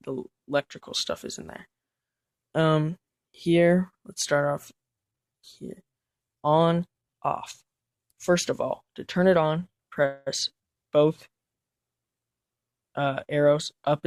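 At 10.05 s the sound stalls for about a quarter second, to 10.28 s, and the last bit of audio is stretched into a short fading buzz rather than silence. That's a call audio freeze, likely packets held up in transit draining the jitter buffer. When it resumes nothing's lost, but everything after is pushed back about 211 ms.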